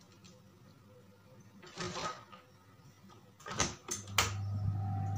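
From the start to 3.62 s the audio runs at about 0.71 times normal pace, a time-stretched section, likely from software lengthening it by repeating short pieces. It drags, yet unlike slowed playback the pitch stays unchanged.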